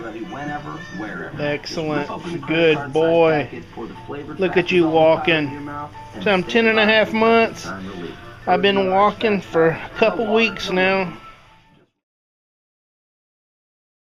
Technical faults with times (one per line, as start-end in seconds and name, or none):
none